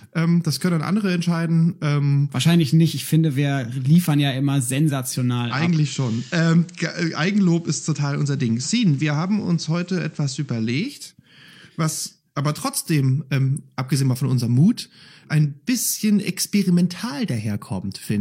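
Radio audio that undergoes digital radio blending to analogue from 5.32 s to 11.05 s: the receiver lost the digital stream and cross-faded over 261 ms to the station's FM broadcast, then later returned. During that stretch the level sits about 1 dB lower, and a faint hiss appears roughly 35 dB under the signal. That added hiss and the smooth fades, rather than abrupt switching, distinguish it from a simple codec bandwidth drop.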